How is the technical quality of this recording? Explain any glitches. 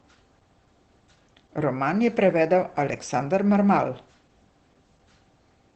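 The recording is limited by low-bitrate speech coding that runs the whole length of the clip.

Opus voice compression, throughout: the speech passes through Opus's SILK linear-prediction coder in wideband mode, which models the voice and codes its excitation coarsely at a rate that fits roughly 12 kbps. The band is cut off with nothing above about 8.6 kHz, so the voice loses its air and crisp sibilance. The damage is plainly audible, leaving the speech muffled, slightly hoarse and faintly robotic.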